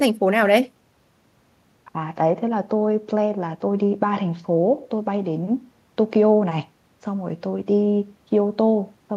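Nothing in the speech stood out as a technical problem on listening.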